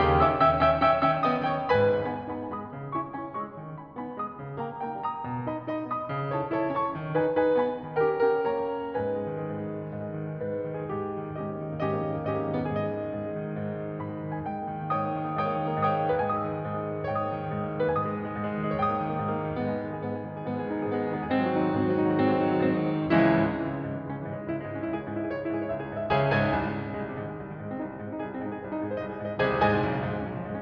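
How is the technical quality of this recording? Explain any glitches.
No glitches or technical faults can be heard anywhere in the music.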